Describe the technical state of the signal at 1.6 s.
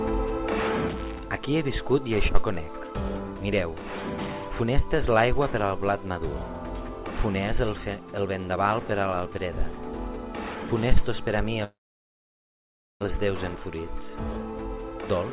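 At 1.6 s you're in the middle of a one-channel dropout, which starts at 0.89 s and runs right to the end. The level falls abruptly by about 6 dB there and stays down. The likely cause is one side of the stereo pair going silent, so the mono fold-down loses half of everything the two channels shared, and anything that lived only on the missing side is gone. The call codec's band limit still holds, with nothing above 4 kHz.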